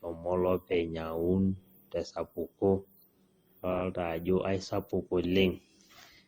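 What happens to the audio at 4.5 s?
At 4.5 s, as throughout the speech, the audio is likely suffering from transcoding between lossy codecs. Its layered artefacts fit an MP3 encode near 64 kbit/s re-encoded by Opus near 32 kbit/s, each stage adding its own smearing, with nothing above 20.1 kHz.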